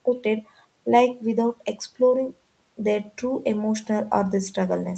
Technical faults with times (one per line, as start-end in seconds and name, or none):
none